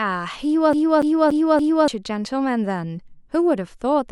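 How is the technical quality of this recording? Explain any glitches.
The recording has one clear glitch, a CD stuck on one turn, from 0.73 to 1.88 s. The speech locks into a 0.29 s fragment that plays four times, each pass cut off by a brief mute as it jumps back. A scratch keeps kicking the laser back one track at the same point of every rotation. The even, mechanical rhythm sets it apart from a network dropout, whose repeats would be uneven and blurred rather than identical.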